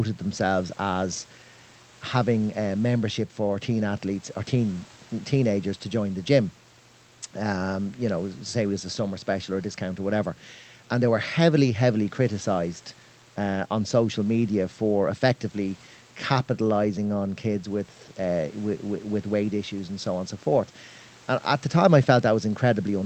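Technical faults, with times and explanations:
No technical faults can be heard in this speech clip. It has passed through a WebRTC call path whose Opus coding limits the top end to about 8 kHz, and room noise sits well below the speech, about 29 dB down.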